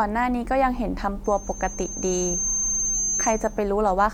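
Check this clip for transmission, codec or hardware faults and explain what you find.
There is one fault: a loudspeaker feedback squeal from 1.24 s to 3.69 s. A single tone near 6.3 kHz rises out of the speech, swelling over roughly a second and a half until it is about as loud as the speech itself. The microphone is hearing the loudspeaker it drives, and at that frequency the loop returns more than it receives, so the tone feeds itself. The gradual self-reinforcing growth is what separates it from a steady electrical whine.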